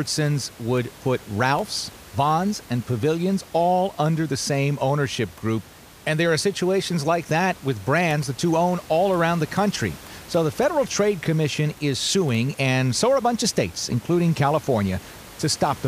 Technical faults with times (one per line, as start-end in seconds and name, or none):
none